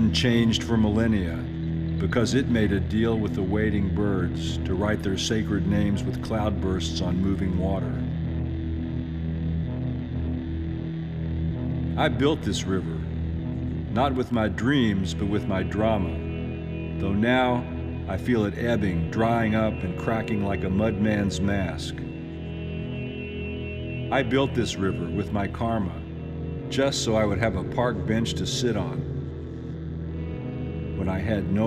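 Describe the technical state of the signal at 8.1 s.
At 8.1 s the signal is intact, with no audible dropout, distortion, glitch or other technical fault.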